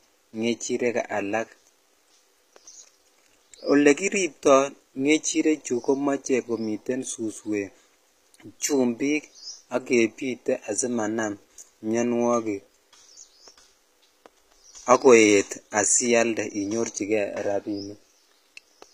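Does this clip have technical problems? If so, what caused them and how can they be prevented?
Yes. The speech was likely squeezed through HE-AAC compression, where spectral band replication rebuilds the treble from copied lower bands. Throughout, s sounds turn gritty and lispy, nothing survives above 15.5 kHz, and the damage fits a bitrate near 24 kbps. Encoding at a higher bitrate with plain AAC would prevent it.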